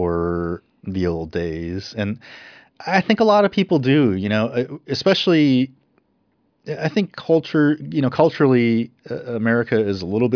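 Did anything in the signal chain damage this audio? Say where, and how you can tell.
No, nothing in the signal chain audibly damaged this speech.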